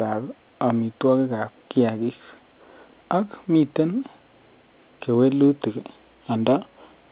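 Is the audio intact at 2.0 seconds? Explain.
Yes, the audio is intact at 2.0 seconds, with only the narrow, telephone-band character of the G.711 coding that runs through the whole clip.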